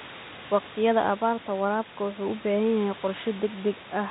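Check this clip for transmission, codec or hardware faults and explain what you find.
No transmission, codec or hardware faults turn up in the speech: the room noise sits about 17 dB below it, and the call path carries the narrowband sound of G.711 A-law at 64 kbps, with nothing above 4 kHz.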